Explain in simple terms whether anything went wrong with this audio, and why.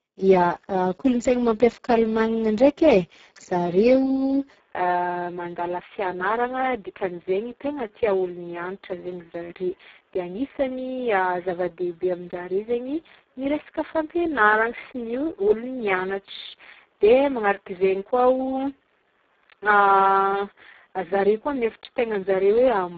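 The speech has been squeezed hard by the Speex codec, an old voice-chat format. With so little data to work with, voices come out rough and hoarse for the whole clip. Nothing is heard above about 7.7 kHz.

At 4.6 s the sound turns duller and boxier and stays that way to the end. The top of the sound now stops near 3.8 kHz, and a faint new background noise appears. This is likely an input switched to a poorer device, such as a headset, with no gap or volume jump.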